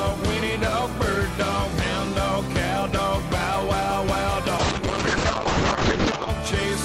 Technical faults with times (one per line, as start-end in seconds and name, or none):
4.58-6.35 call bitrate drop